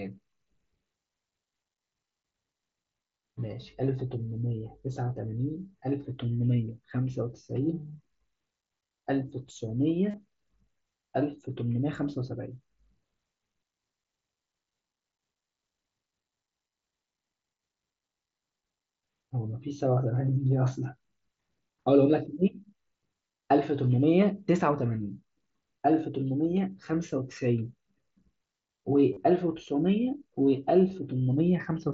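At 10.11 to 10.14 s and again at 29.13 to 29.17 s, the speech briefly turns into a buzzy, held tone at full level for about 30 ms, then warbles slightly as the real signal resumes. This is concealed Bluetooth headset packet loss: a short run of consecutive voice packets never arrived over the mSBC wideband link, and the receiver covered each gap by repeating the closest-matching recent stretch of waveform.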